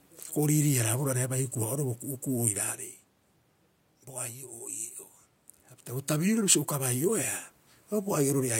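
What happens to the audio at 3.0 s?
Nothing goes wrong at 3.0 s: the speech carries on intact there, with only the room's own background noise audible underneath it.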